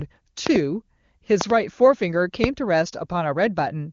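Loud pops land at 0.47 to 0.58 s and 1.41 to 1.52 s as quick double pops, then a single one at 2.44 to 2.46 s, each roughly 20 dB above the speech. They're likely voltage spikes from a plug, switch or static, with the speech carrying on underneath.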